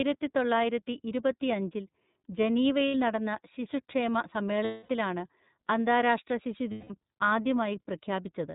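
The iLBC codec runs through the whole speech recording, cutting everything above 4 kHz and leaving a plainly rough, synthetic edge, which fits 30 ms frames at about 13 kbps. Lost iLBC frames at 2.88–2.95 s (just before "നടന്ന ശിശുക്ഷേമ"), 4.65–4.89 s (just after it) and 6.71–6.91 s become held, buzzy vowels as the decoder repeats the last pitch cycle.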